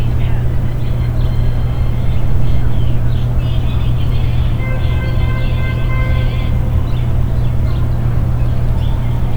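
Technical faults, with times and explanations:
Nothing technical stands out here: the audio runs through with no dropouts, clicks or glitches to point to.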